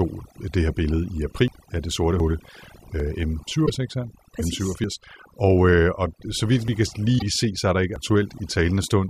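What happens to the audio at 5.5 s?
At 5.5 s the speech carries overdone noise removal, as it does across the whole clip. The noise reduction is set too strong. Frequency bands near the noise level are pushed down or cut, taking quiet speech detail with them. The background drops and breaks up into twinkling specks.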